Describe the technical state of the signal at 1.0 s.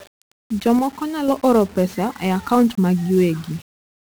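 At 1.0 s the speech sits inside a short level drop running from 0.79 to 1.28 s. Loudness falls abruptly by about 6 dB and springs back just as suddenly, with no fade at either edge. That is the mark of one channel drops out, likely one stereo channel going silent before the mono sum. A gain change or fader move would ramp. This is a clean step, and material unique to the lost side vanishes with it.

Under that, the whole signal carries 1-bit DFPWM compression, heavily damaged. Each sample is a single bit nudging an adaptive level up or down, so a dense broadband fuzz and crackle rides on the speech and the treble is swamped by hiss. The texture, which fits a 48 kbps one-bit stream, stays constant through the dropout. Packet-loss or clipping artefacts would come and go with the signal.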